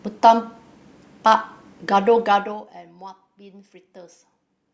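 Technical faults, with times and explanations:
2.2 to 2.84 s, zipper noise: the speech level drops by about 20 dB in 1 dB jumps, around thirty per second, with no smoothing between them. Each jump leaves a small click, so the fade ticks and buzzes instead of gliding like a fader move.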